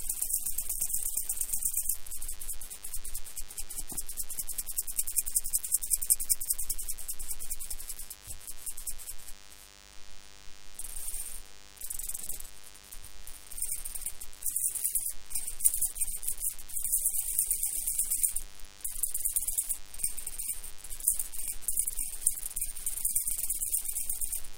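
Throughout, a DECT cordless phone buzz sits under the everyday sounds. Radio bursts every 10 ms get rectified, giving a thin 100 Hz buzz about 20 dB down.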